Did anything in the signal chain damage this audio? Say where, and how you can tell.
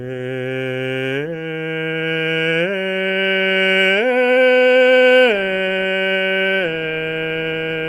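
No, nothing in the signal chain has damaged this music. No stage leaves an audible mark anywhere in the recording.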